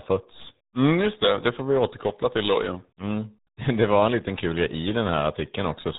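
Throughout, the speech carries RealAudio 14.4 codec damage. Nothing passes above 3.9 kHz. Heavy coding leaves it muffled and gargly, which fits an 8 kbit/s dial-up codec.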